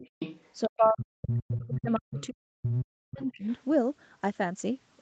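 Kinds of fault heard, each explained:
Other side's voice leaking through, 0.03 to 0.83 s, 1.59 to 1.66 s, 1.90 to 2.00 s, 2.16 to 2.26 s, 2.64 to 2.78 s and 3.44 to 3.61 s: a second voice surfaces in scraps, likely loudspeaker echo the canceller failed to remove, sitting from roughly 5 dB to roughly 35 dB below the speech.
Speech suppressed in double talk, 0.67 to 3.47 s: while the far side's voice overlaps, the speech repeatedly dips, by as much as roughly 40 dB, over about three seconds, likely because the echo canceller turned down both voices when it could not tell them apart.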